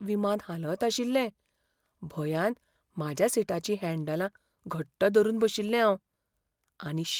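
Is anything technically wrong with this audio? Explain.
No, nothing technically wrong can be heard in this speech recording. The signal stays continuous and consistent throughout, with no fault to point to.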